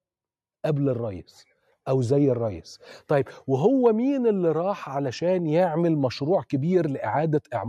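No technical faults can be heard anywhere in the audio.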